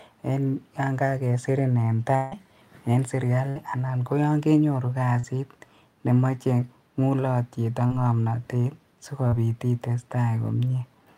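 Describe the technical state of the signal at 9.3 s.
At 9.28 to 9.34 s, right after "nemoche ngulotyet ak ngomnotet", there is short concealed packet loss. About 40 ms of speech never arrived. The receiver extrapolated over the gap, leaving a brief smear.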